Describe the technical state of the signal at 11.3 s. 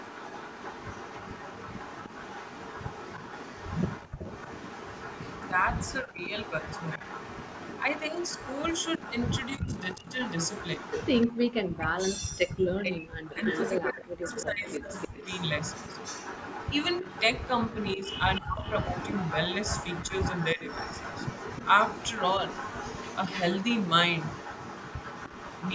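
At 11.3 s the room sound drops out almost completely, falling by about 38 dB between 11.27 and 11.39 s. This is background gated by the echo canceller: while the far-end loudspeaker was playing, the canceller clamped the microphone down hard, then released it about a tenth of a second later.

Across this same moment, within the stretch from 9.57 to 20.63 s, the talker's voice dips and breaks into pieces, at worst by around 40 dB and for roughly 3 s in total. This is speech suppressed in double talk. With both sides talking at once, the canceller likely could not separate the local voice from the loudspeaker echo, so it turned both down.

Under all of this sits an echo leak that runs through the whole recording. A faint copy of the sound trails it by 305 ms, roughly 15 dB below the direct level. The likely cause is a loudspeaker on one side whose echo canceller let part of what its microphone picked up pass back into the call.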